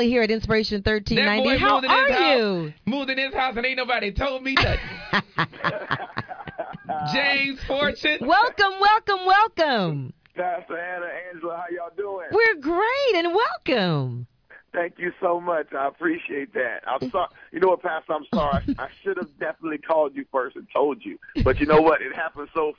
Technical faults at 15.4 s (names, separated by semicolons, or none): none